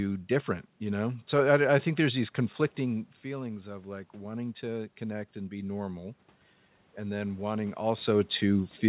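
After "think there's these conflicting", automatic gain rising swells voice and room noise together about 6 dB from 3.23 to 6.09 s, chasing an input that fell about 11 dB.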